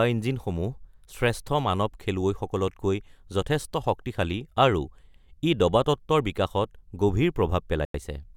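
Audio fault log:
7.85–7.94 s, Bluetooth stall: the speech drops to full silence for 92 ms and then resumes, likely because delayed wireless packets emptied the headphone buffer.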